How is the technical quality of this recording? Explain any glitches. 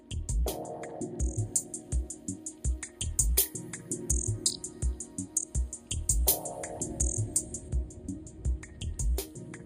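The recording has one fault. From 1.38 to 7.69 s, pre-emphasis is left on: a 75 µs FM treble boost was never de-emphasised, leaving about 13 dB extra at 10 kHz, so the sound turns thin, bright and sibilant.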